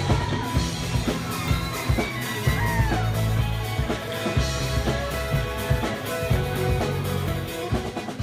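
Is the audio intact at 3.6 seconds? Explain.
Yes, the audio is intact at 3.6 seconds, with no dropout, click, distortion or other fault at that point.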